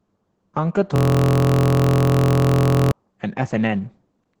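From the first moment the speech sounds muffled, hoarse and slightly robotic, with nothing above about 8 kHz. That is Opus voice compression. The codec is working in its SILK linear-prediction mode at wideband, and the heavy damage points to a low bitrate of around 10 kbps. At that rate the excitation signal driving the speech model is quantised so coarsely that the natural grain of the voice gives way to a rough, synthetic texture.

From 0.96 s to 2.92 s the audio turns into a steady buzz at about 43 Hz as one tiny fragment repeats exactly, over and over. This is a system hang loop. The computer or driver stalled while the audio hardware kept replaying the same ring buffer. Each pass lasts 23.22 ms, which fits a 1024-sample buffer. A loop that short fuses into a continuous tone rather than a stutter.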